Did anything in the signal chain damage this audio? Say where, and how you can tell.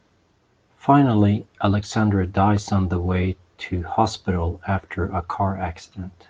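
No, nothing along the chain audibly damaged this speech recording, and no stage leaves a mark that can be heard.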